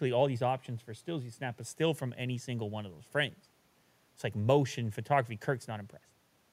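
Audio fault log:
Nothing to flag here, as this speech clip turned up no faults at all.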